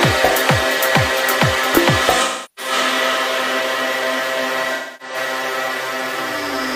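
AAC frame loss with concealment hits from 2.21 to 2.72 s and again from 4.75 to 5.16 s. Each time, the decoder rebuilds missing frames from the last good spectrum, producing a smeared, phasey, noisy stretch of about 340 ms, then about 260 ms.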